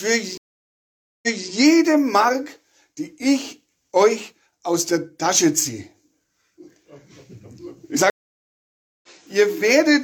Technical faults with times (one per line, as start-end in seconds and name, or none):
0.37-1.51 stream reconnect
8.10-9.08 stream reconnect